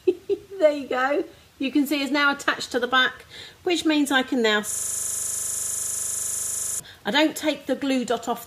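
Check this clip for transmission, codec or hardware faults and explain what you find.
Two faults stand out, both late in the clip.

From 4.71 s to 6.80 s the audio locks into a rapid, buzzing stutter: one 40 ms fragment repeats 52 times, so the output drones at 25 Hz. This is a system hang loop. The computer or its audio driver stalled, and the sound hardware kept replaying the same stretch of its ring buffer. The 40 ms cycle fits a small buffer, which is why it sounds like a coarse buzz and not a slower machine-gun stutter.

At 8.08 s the audio skips forward by a few milliseconds. These are compressed frames skipped: what sounds like a single frame was missing or rejected as damaged by the decoder, so playback jumped past it.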